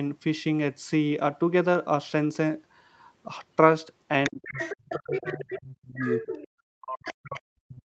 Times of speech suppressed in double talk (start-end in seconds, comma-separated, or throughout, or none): 4.28-6.27, 6.72-7.94